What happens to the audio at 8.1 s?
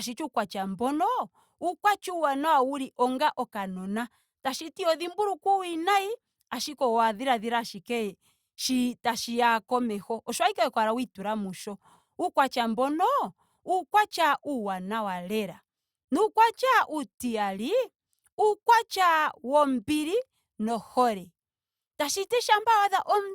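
Nothing goes wrong at 8.1 s; the speech continues intact through that moment with no dropout, click, glitch or change in level or tone.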